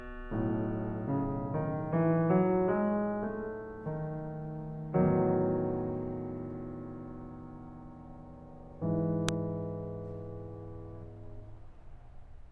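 At 9.29 s the music is hit by a file header played as audio: a join where a WAV header was not stripped, so its bytes played as samples. It sounds like a sharp snap, a near-vertical spike on the waveform and a thin full-band stripe on the spectrogram.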